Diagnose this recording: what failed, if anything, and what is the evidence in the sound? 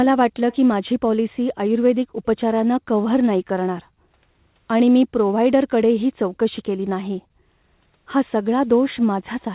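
Call processing: an echo leak between 0.51 and 0.57 s, where a very faint copy of the speech trails the original by 197 ms. The likely cause is an echo canceller at the far end failing to remove its loudspeaker's sound from the microphone signal it sent back.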